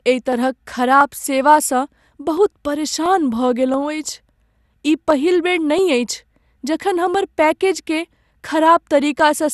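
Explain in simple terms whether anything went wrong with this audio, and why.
Two things went wrong with this speech recording.

The first runs through the whole clip: it sounds dull and gurgly, with a grainy edge on the voice and nothing above about 12.2 kHz. That's the sound of MP2 compression, likely squeezed too hard. The format splits the sound into narrow slices and hands out a limited budget of detail; when the budget runs short, the top slices get switched off and the rest turn coarse and bubbly.

The second is a steady ticking. From about 0.33 s to 9.2 s there's a click roughly every 0.68 s, well over a dozen in all. These are clock drift buffer slips. Two pieces of equipment were likely each keeping their own time and disagreeing very slightly, so the holding area between them slowly filled up or ran dry. Each time it did, a tiny sliver of sound, only a handful of samples, got dropped or repeated, and you hear that as a click.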